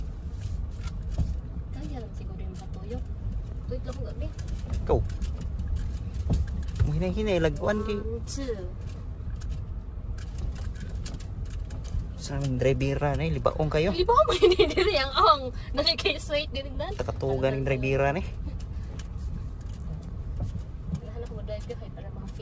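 No audible faults occur anywhere in this recording.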